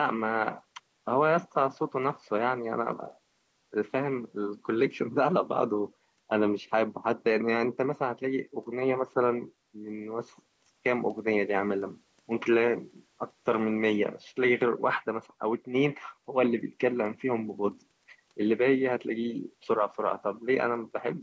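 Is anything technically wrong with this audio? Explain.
No, nothing here is technically wrong with it.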